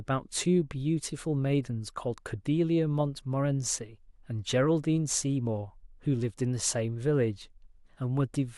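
No technical faults can be heard anywhere in the speech.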